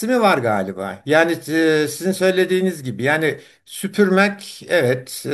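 No technical faults can be heard anywhere in the recording.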